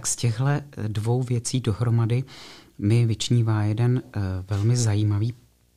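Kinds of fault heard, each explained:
Video or display buzz: A nearby screen or video cable is leaking its picture timing into the audio, leaving a 60 Hz buzz with a thin layer of hash above it under the speech for the whole clip, sitting roughly 40 dB below the voice. On a spectrogram it shows as a steady line at 60 Hz with harmonics stacked upward and faint broadband hash. In the waveform, the pauses between phrases carry a small periodic ripple instead of silence.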